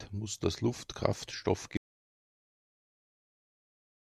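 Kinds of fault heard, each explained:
Audio dropout to silence: the input was likely lost while silence kept being written, so speech cuts off at 1.77 s into total silence, without room tone, to the end.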